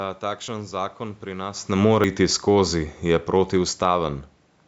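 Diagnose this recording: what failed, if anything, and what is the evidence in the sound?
A jump forward at 0.48 s, just before "zakon pri", and at 2.04 s. There's no silence; the audio skips roughly 40 ms and then about 70 ms. That's likely a dropped buffer (overrun) at the driver or buffer stage, where the hardware overwrote samples before the program collected them.

From 1.69 s to 4.47 s the level sinks by about 6 dB, and the room noise sinks with it, so this isn't the talker backing off. It's automatic gain falling in the call processing: the AGC heard the input as too loud, or its background noise as too strong, and eased its gain down.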